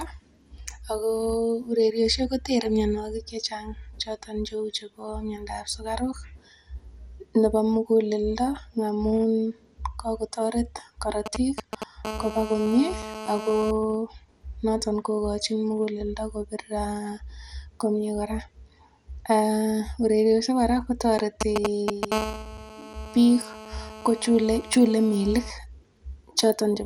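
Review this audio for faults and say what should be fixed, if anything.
Throughout the clip the speech sounds dull and granular, with a gurgling quality and nothing at all above 17.4 kHz. The likely cause is MP2 compression at a low rate, which fits about 80 kbps. At that rate the MPEG Layer II encoder cannot fund all 32 sub-bands, so upper bands drop out or flicker, and the bands that remain are quantised coarsely enough to be plainly audible. To prevent it, record and archive in PCM, or encode MP2 at 192 kbps or higher.

From 11.26 to 11.84 s and again from 21.19 to 22.12 s there are GSM signalling bursts: a galloping dit-dit-dit of ticks and short raspy buzzes at 217 Hz. A nearby 2G handset is exchanging control traffic with the network, and the audio electronics rectify its intermittent radio pulses. The first group sits a little below the speech. The second is slightly louder than the speech. 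To prevent it, keep phones away from microphones, preamps and cables, or switch them to flight mode.

Continuous GSM phone buzz follows each signalling group, from 12.05 to 13.71 s at about −10 dB relative to the speech, and from 22.12 to 25.51 s at about −12 dB. It is a hard, harmonic-rich buzz at 217 Hz with no relation to the speech. The handset has moved into a call and now transmits a burst 217 times per second, which the circuitry demodulates into the audio path. To prevent it, use shielded balanced cabling with RF-filtered inputs and keep active phones well clear.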